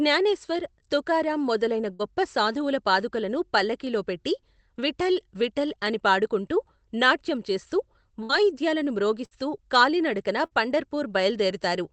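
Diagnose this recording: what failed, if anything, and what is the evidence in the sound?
Network: bursts of packet loss at 1.93, 8.23, 9.25 and 10.45 s. The receiver holds and fades the last speech for about 55 ms, then skips 60 ms.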